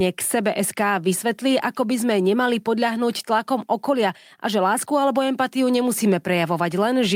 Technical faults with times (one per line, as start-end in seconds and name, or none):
none